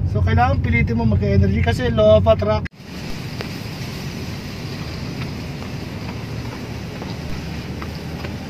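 A low thump, like a knock under the sound, lands at 3.10 s and again at 7.30 s, while the material carries on unchanged. Each is a DC step: the waveform's zero line suddenly jumps by an offset of about -19 dBFS, and that abrupt shift is what you hear. After each jump the offset drains away gradually, the way a 5 Hz high-pass would pull it back toward zero, so only the sudden edge itself is audible.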